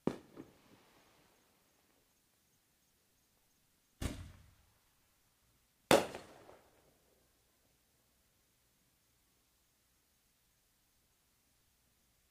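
Frames out of order: at 0.81–0.99, 2.56–2.74, 10.08–10.27 and 11.84–11.98 s, two adjacent blocks of frames were decoded in swapped order, about 93 ms each, and about 70 ms at the last. Each stretch plays its halves exchanged, a garbled flutter, without losing time.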